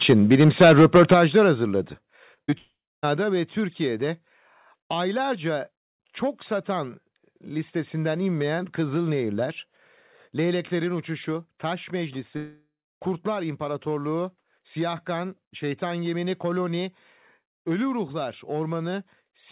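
A speech recording where the opening, from 0.04 to 1.14 s, has a harsh, crackling edge on its loudest syllables. This is microphone overload: the input was likely set about 6 dB too hot, flattening the tops of roughly a tenth of the waveform against the converter's limit. The level then drops abruptly in steps at 0.13, 1.14, 2.16, 3.17 and 18.04 s, by about 2, 7, 4, 4 and 1 dB, likely the microphone volume stepped down by the call software reacting to the overload. Between 2.34 and 2.54 s there are three brief smears, at 2.34, 2.45 and 2.50 s, each a few hundredths of a second long. This is short concealed packet loss, where the receiver stretched the preceding sound over 20 to 40 ms gaps before blending back. Then from 2.58 to 3.05 s, and again from 12.37 to 13.00 s, the sound turns into a fading buzz or hiss and drops to silence for about a quarter of a second before resuming with material missing. 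Each is likely a long network dropout, with roughly 460 ms and 620 ms of audio never arriving. Throughout, the band stops at 4 kHz, consistent with G.711 mu-law telephone coding on the call path.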